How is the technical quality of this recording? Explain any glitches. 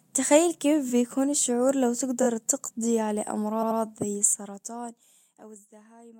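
The speech recording has three audible glitches: two stutters and one stretch of ticking.

Repeated frames at 2.22 s (after "الشعور لو") and 3.62 to 3.79 s (after "تقضي على"): compressed blocks replay twice, causing stutters and adding about 43 ms and 171 ms.

Zipper noise from 4.16 to 5.67 s: the level drops about 25 dB in hundreds of unsmoothed steps per second, producing a ticking, zipping texture over the speech.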